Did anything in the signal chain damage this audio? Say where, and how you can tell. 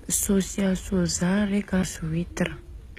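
Yes. At the codec stage, the whole clip has the sound of HE-AAC compression, likely at a low bitrate around 20 kbps. The lower spectrum is coded directly and the treble is rebuilt from copies of lower bands, so the top end stays bright but doesn't belong to the speech. Nothing sits above 14.9 kHz, and the damage is plainly audible: s sounds come out gritty and lispy, with a metallic edge where rebuilt harmonics fail to line up with the real ones.

At the playback stage, a CD skip occurs at 1.83 s. The laser lost its track and landed on a different turn of the disc's spiral, so the player muted briefly, for roughly 10 ms, then resumed from another point in the programme. You hear it as a short tick followed by an abrupt discontinuity in the speech, with the flow jumping rather than continuing where it left off.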